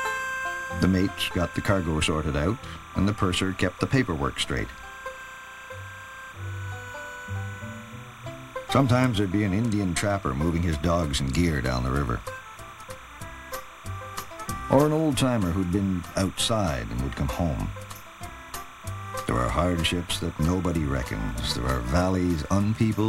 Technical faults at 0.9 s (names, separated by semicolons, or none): timecode bleed